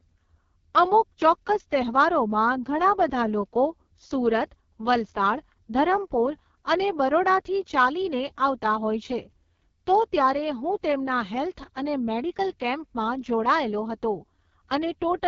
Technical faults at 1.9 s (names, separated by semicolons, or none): AMR wideband (HD Voice) codec